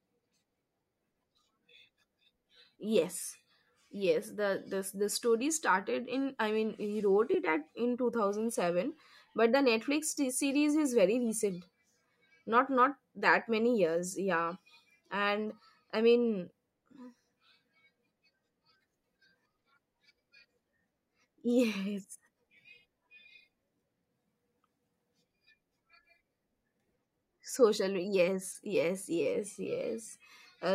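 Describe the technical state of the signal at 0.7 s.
At 0.7 s the speech signal is intact, with no fault beyond the light, ordinary coding of the lossy compression it has passed through.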